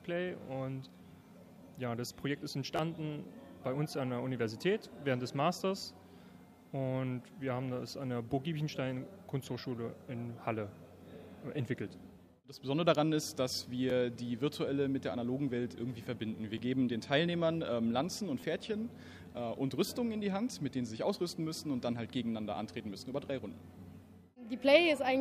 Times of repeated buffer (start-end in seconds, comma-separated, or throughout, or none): 2.76-2.79, 13.90, 16.58, 18.40-18.43